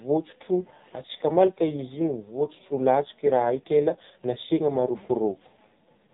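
From start to finish the speech carries the sound of the AMR narrowband mobile codec, heavily degraded. Nothing above 3.8 kHz survives, so the top of the spectrum is gone and sibilants lose their edge. The voice is rebuilt from a vocal-tract model excited by sparse pulses, and with so few bits that rebuild is coarse: a buzzy, synthetic timbre that points to one of the low AMR-NB modes, around 5.9 kbps.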